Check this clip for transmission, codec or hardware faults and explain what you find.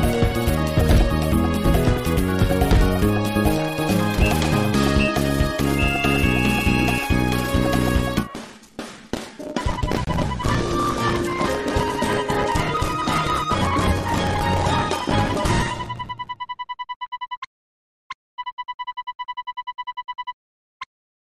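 Two short glitches, both corrupt frames that got decoded anyway. At 10.05 to 10.09 s and 14.64 to 14.66 s, damaged bits in a few compressed frames made the decoder drop energy in the wrong frequency bands, giving brief chirpy blips, the second one louder.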